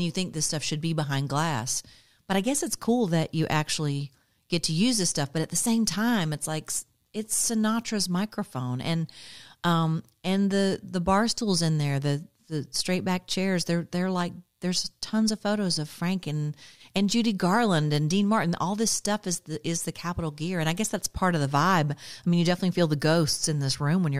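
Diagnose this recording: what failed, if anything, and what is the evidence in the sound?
Nothing has failed in this speech recording, and no stage from capture through to playback leaves an audible fault. There is no event in the sound to point to as evidence of a problem.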